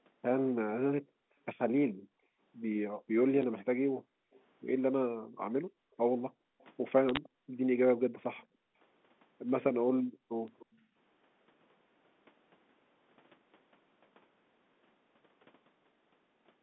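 A speech clip over a G.711 phone line, limited to the telephone band. Background gated by the echo canceller is heard from 1.02 to 7.54 s, 8.46 to 8.77 s and 9.84 to 10.95 s. The room sound sinks by up to about 40 dB, then returns. The canceller clamps the microphone while the far end plays. Bit errors on a digital phone line give sharp ticks at 3.43 s, 7.09 to 7.17 s and 10.48 s. Flipped bits corrupt single samples, and high-order hits crack loudly. A faint delayed copy of the speech trails by 297 ms at 4.33 to 4.41 s, 6.59 to 7.29 s, 8.38 to 8.46 s and 10.59 to 10.76 s. It sits roughly 30 to 35 dB down. This is likely echo leak, from a loudspeaker whose echo canceller let some pickup through.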